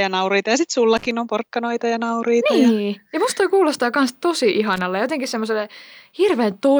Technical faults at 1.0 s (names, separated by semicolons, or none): loose connector crackle